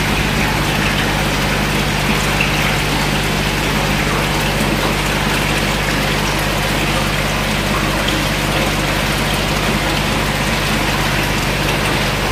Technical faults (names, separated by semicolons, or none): overlapping chunks